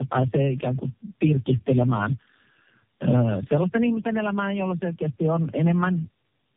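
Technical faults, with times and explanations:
Throughout: tandem speech coding. The speech passes through three low-rate speech codecs in a row, and each one re-encodes the previous one's damage. The roughness, muffling and warble build up beyond what any single codec would cause. The pattern fits AMR-NB at 7.4 kbit/s, then G.729A at 8 kbit/s, then AMR-NB again, joined by G.711 links. Nothing reaches above 3.5 kHz. Piled-up, layered artefacts set this apart from one narrowband codec.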